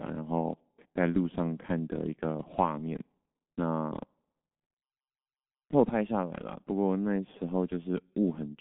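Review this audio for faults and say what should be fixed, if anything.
Across the whole recording the speech sounds muffled and hoarse, with consonants smeared together. That is the G.723.1 codec at work: it codes the voice in 30 ms frames from a slowly updated vocal model. The damage is heavy here, which fits its 6.3 kbit/s rate. Nothing is left above 3.8 kHz, and the line band sits between about 150 Hz and 3.5 kHz. Carry the call on a wideband codec at a higher bitrate instead.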